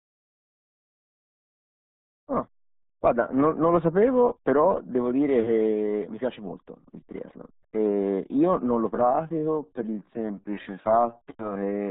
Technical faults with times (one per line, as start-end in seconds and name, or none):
0.00-11.91 RealAudio 14.4 codec
8.91-11.91 time-stretched section